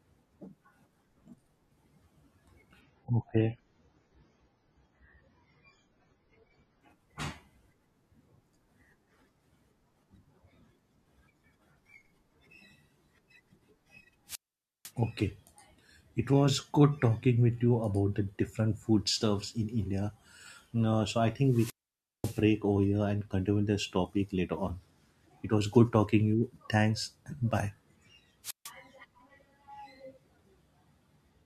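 From 2.81 to 6.81 s the audio switches abruptly to an adaptive stream at a lower bitrate. The highs vanish, with nothing above 7 kHz, and the sound turns thin with codec artefacts. That fits the player stepping down from an AAC stream at about 96 kbit/s to one near 16 kbit/s after the connection slowed. Unlike a dropout, the sound never stops. Only the quality changes, suddenly at both edges.

Three wireless microphone squelch dropouts follow, at 14.27 to 14.92 s, 21.46 to 22.44 s and 28.43 to 28.71 s. Each time the radio signal fades, hiss or static swells, and then the receiver's squelch mutes the output into near silence for about 0.50 s, 0.54 s and 0.15 s. The rising static before each hole sets these apart from a clean network gap or a bitrate drop.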